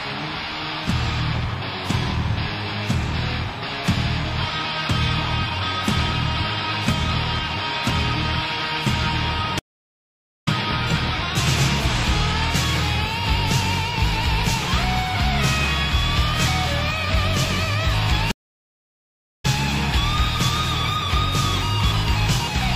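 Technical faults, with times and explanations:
9.59–10.48 s and 18.31–19.45 s, stream reconnect: the connection dropped and the player went silent, for 0.85 s and then 1.08 s. Each time a fresh decoder started mid-stream. The audio fades back in about a second further on, so material is skipped.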